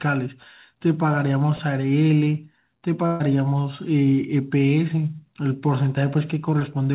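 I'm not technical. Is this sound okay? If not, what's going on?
No. At about 3.06 to 3.22 s, the speech briefly smears into a held, fading sound and then jumps ahead. This is a burst of packet loss: about 140 ms of audio never arrived, so the call stretched the last sound to cover the gap.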